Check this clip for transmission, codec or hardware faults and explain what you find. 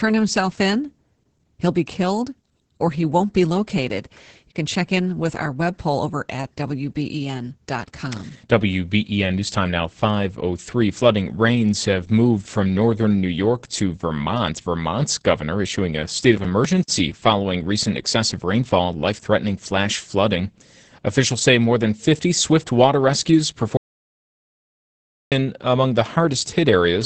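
Two faults are present: heavy voice-codec compression across the whole recording, and a complete dropout to silence near the end.

The Opus voice compression runs throughout. The speech sounds muffled and hoarse, with a faintly robotic edge, and nothing is heard above about 8.8 kHz. Opus in its SILK linear-prediction mode squeezes the voice into a wideband range and codes the excitation coarsely. The damage is heavy enough to suggest a low bitrate, around 10 kbps, which explains the muffled, hoarse timbre.

The audio dropout to silence runs from 23.77 s to 25.32 s, just after "swift water rescues" and ending before "among the". For about 1.5 s the sound stops dead into silence with no room tone, then resumes mid-flow. That hard gap points to a lost input, such as a disconnected device or a failed link, while the recorder kept writing silence. Anything spoken in that span is gone.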